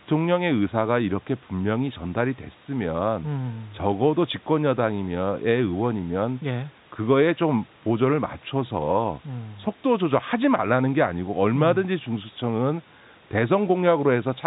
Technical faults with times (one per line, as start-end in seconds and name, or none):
none